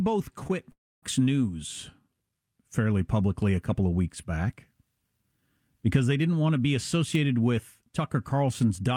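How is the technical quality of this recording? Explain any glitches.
The speech is marred by three network glitches near the start. From 0.43 to 0.51 s, two back-to-back short concealed packet losses each replace about 20 ms with extrapolated sound, heard as a brief smear; a spectrogram shows smeared, blurred harmonics. From 0.71 to 1.04 s, the sound fades into roughly a quarter second of silence, likely a long network dropout, and the waveform is flat there before the speech resumes with that stretch missing.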